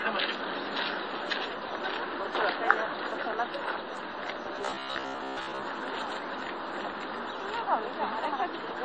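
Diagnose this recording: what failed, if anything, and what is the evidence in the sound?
Transcoding between lossy codecs, throughout (codec stage): nothing above 8.3 kHz, with layered smearing that points to a low-rate MP3 likely re-encoded as WMA, which kept the earlier cut-off.

Robotic sound from repeated short buffers, 4.56 to 5.63 s (driver or buffer stage): a rigid 66.7 Hz buzz, which fits roughly 15 ms chunks likely repeated for most of that stretch while fresh audio was skipped.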